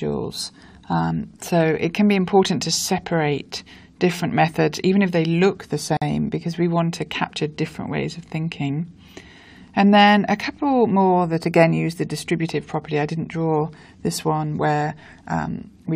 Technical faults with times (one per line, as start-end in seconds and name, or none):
5.97-6.02 gap at a join of encoded pieces